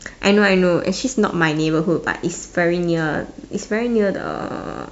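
Speech recording, no technical faults heard.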